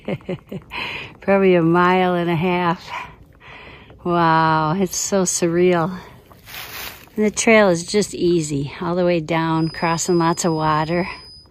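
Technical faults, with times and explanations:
9.51–11.50 s, feedback whistle: a thin, steady tone at 5 kHz appears and holds to the end, sitting roughly 25 dB below the main sound and swelling and fading slowly in level rather than building. This is likely a loudspeaker-to-microphone loop hovering just at its gain limit, so the single frequency where the loop gain reaches unity keeps ringing without tipping into runaway howl.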